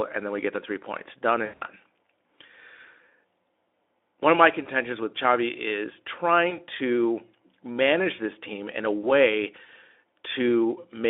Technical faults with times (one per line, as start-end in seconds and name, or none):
1.45-1.63 VoIP packet loss concealed by the speech codec
4.63-4.68 VoIP packet loss concealed by the speech codec
6.49-6.60 VoIP packet loss concealed by the speech codec
9.01-9.11 VoIP packet loss concealed by the speech codec